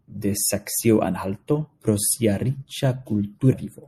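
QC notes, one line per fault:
Throughout: MP3 compression. The speech has a plainly audible watery, swirling quality, with sibilants smeared into metallic chirps. This likely comes from an MP3 encode at a low bitrate, which fits about 64 kbps. With too few bits, the encoder drops the treble above a fixed frequency and zeroes quieter frequency lines. Those lines flicker on and off from frame to frame, producing the swirl and smearing consonant onsets.
3.52 s: damaged data in a compressed stream. A brief blip or squawk cuts through the speech near the end of the clip. Corrupted bytes in the compressed data make the decoder misread the frame at that point, so it loses sync and skips ahead to the next valid frame header.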